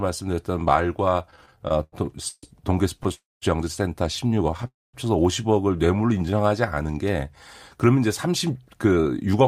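A speech recording with four kinds of network-playback fault. From 1.25 to 3.12 s there are repeated stalls (stutter): sixteen short interruptions where the receiver's jitter buffer ran dry and the last sound was stretched to cover the wait, the longest about 143 ms. In total 385 ms of concealed sound is inserted, about 21% of that stretch. Nothing is lost, but the speech drags and catches unevenly as packets arrive late or too slowly for playback. Two call audio freezes follow, at 3.14 to 3.44 s and again at 4.67 to 4.95 s. In each, a brief held tail of the last sound decays into near-silence lasting about 200 ms and 210 ms respectively, and speech then resumes where it stopped. The pauses add 278 ms and 266 ms, so the playback delay grows by those amounts. The likely cause is packets held up in transit long enough to empty the jitter buffer completely. From 5.76 to 6.76 s a jitter buffer slow-down runs the speech at 87% speed without lowering its pitch. 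Single pitch periods and pause fragments are repeated to add 136 ms of reserve, which gives drawn-out syllables as the buffer rebuilds its depth. From 8.27 to 9.41 s a jitter buffer speed-up does the opposite. Short pitch-period pieces are cut out, removing roughly a tenth of a second, so the speech plays at 109% speed at unchanged pitch and sounds hurried as the buffer sheds excess delay.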